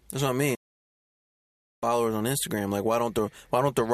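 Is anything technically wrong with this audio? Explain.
Yes, there's a digital broadcast dropout in this speech from 0.55 s to 1.83 s. The receiver stopped getting good frames and muted itself, so the sound fades out in about 8 ms and then goes silent for roughly 1.27 s before picking up again. Whatever was transmitted during that gap is simply gone.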